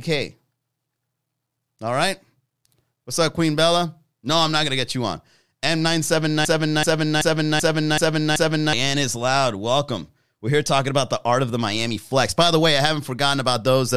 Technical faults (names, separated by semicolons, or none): broken-record loop